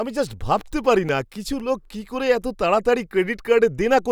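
A scratch on the disc's surface corrupted more data on each revolution than the player's error correction could rebuild, so between 0.57 and 1.85 s the player had to interpolate or mute the lost samples. These CD scratch ticks appear as six short clicks at a steady rate of roughly four per second, each a tiny gap or snap of no more than a few milliseconds, breaking through the speech once per turn of the disc.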